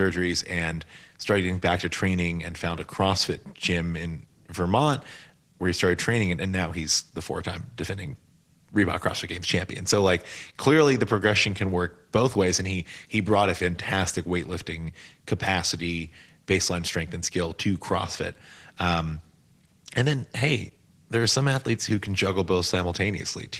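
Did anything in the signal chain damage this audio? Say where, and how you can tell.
Yes, at the codec stage, and it runs the whole clip: the speech carries plainly audible Opus voice compression. The slightly hoarse, robotic texture fits a low rate of around 16 kbps in hybrid mode, with SILK coarsely coding the excitation below 8 kHz and a thin CELT layer handling the top.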